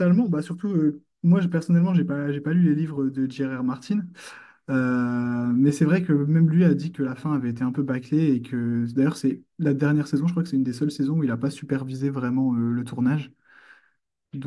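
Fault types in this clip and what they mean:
No technical fault can be heard anywhere in this speech clip. There is nothing to list here.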